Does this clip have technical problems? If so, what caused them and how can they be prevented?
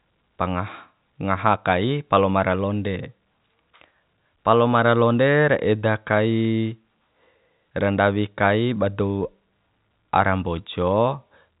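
No, the speech comes through without technical problems, carrying the narrow band of ordinary telephone coding, which fits G.711 A-law and leaves nothing above about 3.8 kHz, with at most a faint level-following hiss from that format's coarse sample steps.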